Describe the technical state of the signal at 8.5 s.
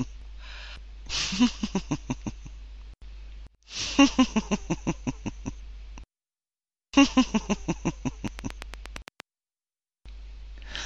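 At 8.5 s the signal sits inside a train of clicks running from 8.28 to 9.21 s. About ten near-identical clicks arrive at a regular 8.65 per second, peaking some 15 dB above the surrounding sound, so they are heard as a steady ticking laid over the audio. The likely cause is an external pulse source, such as nearby equipment or a faulty connection or power supply, injecting each spike. On a waveform they appear as evenly spaced narrow spikes. On a spectrogram they show as thin vertical broadband lines at equal intervals.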